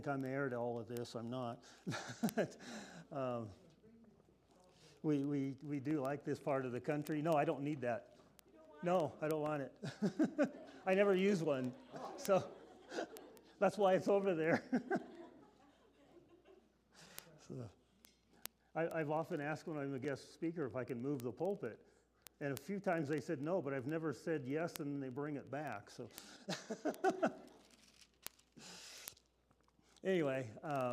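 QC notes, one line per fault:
Throughout, word clock ticks: a steady stream of sharp clicks of uneven strength, about twenty a second, several hundred across the clip, running from 0.1 s to 30.9 s. The receiving device is running on its own clock rather than locked to the sender's digital link, with the two drifting apart by roughly 400 ppm. Each time they slip past each other a few samples are misread and a single sample is dropped or repeated, producing one tick.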